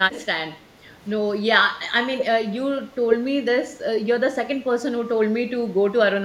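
The speech dips sharply three times: a brief, shallow drop of roughly 10 dB from 0.14 to 0.2 s, a much deeper hole of around 30 dB from 2.71 to 2.8 s, and another of about 20 dB from 3.08 to 3.16 s, each lasting about a tenth of a second or less. This is likely speech suppressed in double talk, where an echo canceller, unable to tell the near talker from loudspeaker echo during overlap, turns the signal down.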